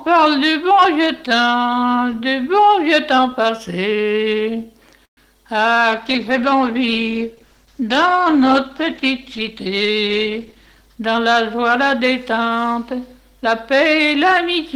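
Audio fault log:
5.05–5.19 s: call audio freeze. The audio stops for about 0.14 s. A brief tail of the preceding sound is carried on and dies away, leaving about 100 ms of near-silence. The likely cause is packets held up in transit until the jitter buffer ran dry. When the stream resumes it carries on from the point where it halted. Nothing appears to be skipped, so the effect is an inserted pause of about 116 ms, and the playout delay is longer by that amount afterwards.
5.93–11.55 s: call bitrate drop. From about 5.9 s the sound turns coarser and more muffled as the encoding rate falls from 32 to 13 kbps. It stays at that low rate for roughly 4.6 s. With so few bits the codec quantises the spectrum more roughly and discards the upper frequencies, which gives a dull quality. Clarity returns near 11.5 s as the bandwidth estimate recovers.
10.01–12.00 s: jitter buffer speed-up. Over these two seconds the audio plays about 6% fast with no change in pitch, so it sounds slightly hurried. 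The receiver was holding more buffered audio than its target and trimmed it by cutting out many short pitch-period segments in succession. About a tenth of a second is removed in total. This overlaps the end of the low-bitrate stretch.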